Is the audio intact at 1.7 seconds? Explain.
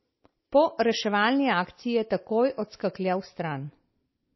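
No, not really. At 1.7 seconds, like everywhere else in this speech, you're hearing what sounds like MP3 compression, and it runs the whole clip. It's likely a starved encoder, with the damage pointing to something around 24 kbps. With so few bits it drops everything above 5.8 kHz, so the sound is dull, and weak frequency lines flicker on and off between frames. That gives a watery, swirly texture and smeared consonant attacks.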